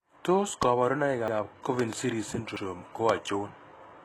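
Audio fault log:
throughout: HE-AAC compression, likely at a low bitrate near 16 kbps. Only the lower spectrum is truly coded, and the treble is rebuilt by copying lower bands upward, so s sounds come out gritty and lispy, with nothing above 12.3 kHz.
0.63–0.65 s, 1.80–1.95 s, 3.09–3.12 s: loud pop. A sudden voltage pulse is added to the signal, probably from a plug, switch or static. Each is a sharp pop about 20 dB above the speech, about 15 dB in the middle event, two in quick succession in the middle event, while the speech carries on underneath.
1.28–1.37 s, 2.56–2.65 s: repeated buffer. Fresh audio arrived late, so the last chunk played again, with no audio lost. An 85 ms piece of speech sounds twice with a hard join, a brief stutter that fits a 4096-sample buffer.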